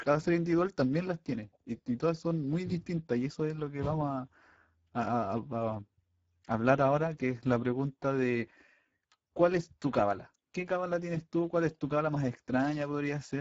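From start to finish the speech carries the sound of the Speex codec at a low quality setting, with a rate that suggests roughly 10 kbps. With few bits left for the excitation, voiced sounds come out hoarse and grainy rather than clean, and nothing is present above about 7.7 kHz. The upper band is a hissy, shaped fill rather than real detail, which separates it from simple low-pass filtering, where the top would be dull but not noisy.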